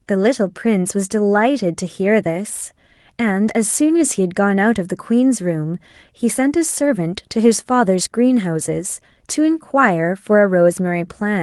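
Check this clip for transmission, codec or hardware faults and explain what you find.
No transmission, codec or hardware faults are audible in this speech; it arrives over a WebRTC call path with the ordinary coding character of an Opus-style call codec, its high end rolling off around 12 kHz, consistent with a bitrate around 32 kbps.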